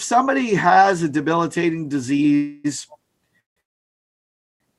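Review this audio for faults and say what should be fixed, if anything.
Call audio freezes at 2.35–2.66 s, 3.40–3.58 s and 3.60–4.62 s stretch the last sound into a fading buzz or hiss, with the last two then falling silent, likely from a drained jitter buffer. Unlike packet-loss dropouts, nothing is lost afterward; playback resumes late. A larger adaptive jitter buffer and steadier network routing would prevent this.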